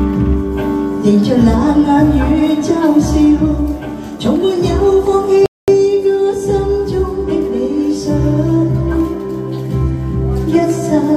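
At 5.46 s the player exhausted its downloaded buffer, a rebuffering stall: the sound drops to silence until 5.68 s, then resumes exactly where it stopped, adding about 220 ms.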